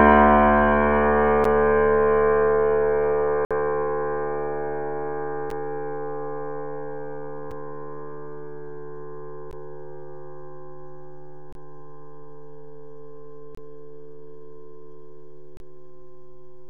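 Gaps between stream segments: timestamps on successive 2-second segments leave small holes, which the player fills with silence. Hard-edged dropouts of about 5 to 57 ms cut into the sound at 1.44, 3.45–3.51, 5.50, 7.51, 9.51, 11.53–11.55, 13.55–13.57 and 15.57–15.60 s. None of the audio itself is lost.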